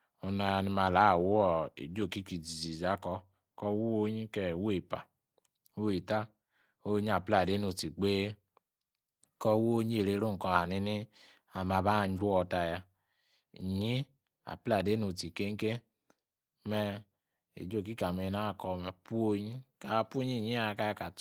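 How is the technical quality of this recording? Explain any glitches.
Nothing in the recording stands out as a glitch; the speech stays steady and unbroken all the way along, with no technical trouble to point to.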